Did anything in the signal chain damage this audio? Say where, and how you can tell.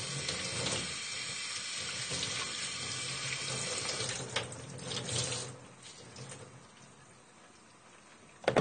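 Yes, at the codec stage: it sounds like AAC compression, likely a low-bitrate AAC-LC encode around 32 kbps. Nothing comes through above 9 kHz for the whole clip, and the sound is dull and smeared with a warbly, fizzy texture where the encoder starved bands and filled gaps.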